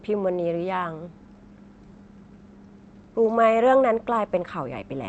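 No faults are present in the speech; it comes through a WebRTC call path whose top end stops near 8 kHz, consistent with an Opus call encode.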